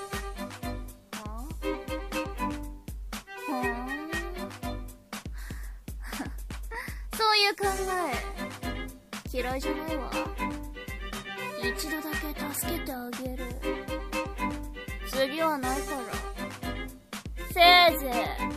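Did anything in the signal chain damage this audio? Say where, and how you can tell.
No, nothing in the signal chain has damaged this audio. None of the stages from capture through to playback leaves an audible mark on it.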